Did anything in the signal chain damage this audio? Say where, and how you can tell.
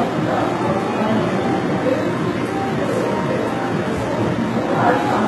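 Yes, at the codec stage, for the whole clip. The treble stays bright but sounds synthetic: sibilant and noisy content turns gritty and metallic, and nothing lies above about 11.8 kHz. The likely cause is HE-AAC compression, whose spectral band replication rebuilds the upper band by copying lower bands upward under a coarse envelope. The heavy damage fits a very low bitrate near 16 kbps. A plain low-pass filter or narrowband codec would leave the top dull rather than bright and misaligned.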